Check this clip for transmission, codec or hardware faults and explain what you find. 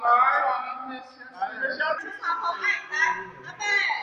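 There's one fault, a section at the wrong speed: from the start to 1.98 s everything runs at 0.79x, likely from a clock mismatch, so it drags and drops about four semitones.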